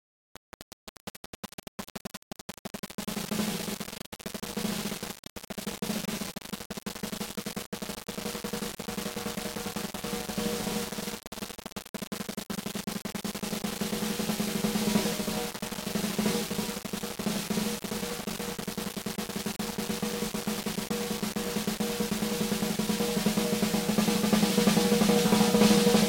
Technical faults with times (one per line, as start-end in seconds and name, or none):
0.00-26.08 low bit depth without dither